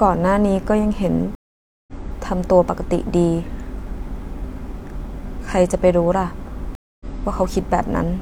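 Twice in this speech recording the stream connection dropped and the player rejoined with a fresh decoder: a stream reconnect at 1.35 to 1.93 s and again at 6.75 to 7.06 s. Each break leaves a hole of silence, 525 ms and then 251 ms, and when the sound comes back it has skipped ahead, by roughly a third of a second the first time and about a fifth of a second the second, which points to a live feed.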